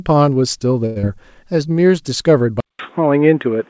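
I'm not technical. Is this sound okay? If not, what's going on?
No. The speech has four separate faults.

Short stall from a late packet, 0.86 to 0.98 s: one piece of audio arrived late over the call, so the receiver held the last sound for about 0.1 s while it waited, then carried on. Nothing is lost, but that sound drags briefly.

Skip ahead, at 1.02 to 1.05 s: right after that, a small slice of sound, less than a tenth of a second, was thrown away to catch up on the delay. Playback jumps forward and the two sides are stitched almost directly together.

Jitter buffer slow-down, 1.45 to 1.89 s: the receiver was running short of stored audio, so it quietly repeated tiny fragments to build a reserve. Here the speech plays at about 89 percent speed, 55 ms longer, with the pitch unchanged.

Input switched to a poorer device, from 2.60 s to the end: the recording goes silent for about 0.19 s, then the sound comes back duller and narrower, with nothing above 3.8 kHz and a faint new background noise, at about the same loudness. 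The likely cause is a change to a lower-quality microphone or headset. Before the switch, the call's own processing already trims everything above 8 kHz.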